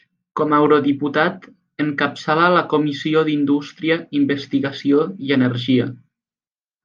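No technical faults are audible anywhere in the recording.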